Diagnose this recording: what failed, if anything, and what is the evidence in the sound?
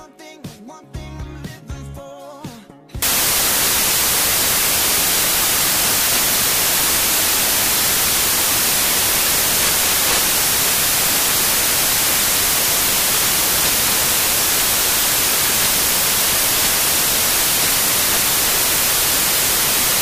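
The sample-format conversion stage failed: from 3.02 s to the end, the reader assembled each sample from the wrong bytes, misaligned by a byte or with the byte order reversed. The rapidly fluctuating least-significant bits then land in the most-significant position, so every value becomes essentially random at large amplitude. The audio turns abruptly into loud, harsh broadband noise, close to white on loud sounds, at 3.02 s and stays that way.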